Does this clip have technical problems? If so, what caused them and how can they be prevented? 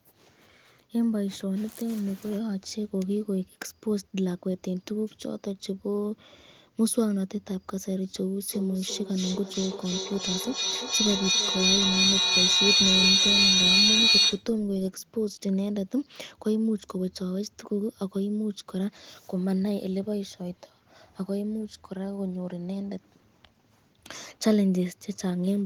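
Yes. From 8.5 s to 14.5 s there is feedback echo between two devices. A second device in the room replays this microphone's signal, the microphone picks it up again, and its echo canceller cannot remove sound it did not play. Each sound returns roughly every third of a second, thinner and more ringing, and the repeats build to about 6 dB above the speech. A spectrogram shows evenly spaced, narrowing copies of each syllable, and the waveform swells instead of decaying. Prevent it by muting the microphone and speaker on all but one device in the room.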